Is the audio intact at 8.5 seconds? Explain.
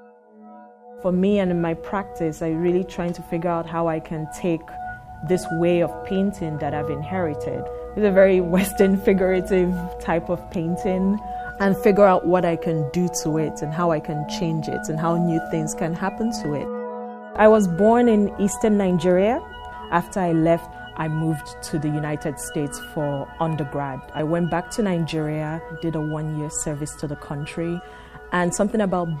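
No. At 8.5 seconds the audio sits inside a run of clock slip clicks lasting from 0.45 to 28.44 s. The likely cause is two devices running on unsynchronised clocks that differ by around 30 ppm, so each time the drift builds to a full sample, one sample is dropped or repeated. The result is a faint, regular tick roughly every 0.7 seconds, about forty across the span, most noticeable where the sound is loud or sustained.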